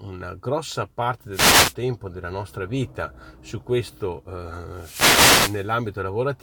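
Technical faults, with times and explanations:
1.32–1.75 s and 4.71–5.72 s, wireless microphone noise hit: a burst of hiss and static sounds over the speech, first between "una grossa parte" and "della nostra vita su", then for about a second near the end. The radio link from the microphone fades as reflected signals cancel, so receiver noise rises. The static swells and recedes rather than cutting to silence, which sets it apart from a digital dropout.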